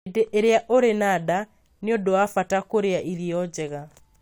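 A speech recording with nothing technically wrong to report.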